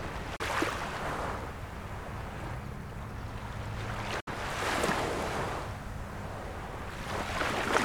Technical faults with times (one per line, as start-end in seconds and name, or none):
0.36-0.41 digital broadcast dropout
4.20-4.28 digital broadcast dropout